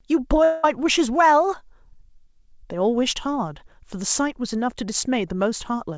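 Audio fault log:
0.44–0.65 s, long network dropout: about 0.2 s of the speech goes missing here, likely because packets stopped arriving for a stretch. The receiver papers over nearly the whole gap by stretching the last bit of sound into a buzzy, fading tail rather than leaving true silence, so you hear a smeared hum instead of a clean cut. When the audio resumes, that chunk is simply gone. The call path's band limit, with nothing above 8 kHz, carries through the patch too.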